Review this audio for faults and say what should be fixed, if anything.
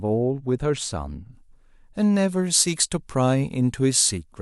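Pre-emphasis left on, from 1.33 s to the end: the speech turns thin, bright and sibilant because a treble boost matching the FM 75 µs curve was never undone by its complementary de-emphasis, leaving 10 kHz about 13 dB hotter relative to 1 kHz. To prevent it, apply the matching 75 µs de-emphasis wherever the boosted signal is received or decoded.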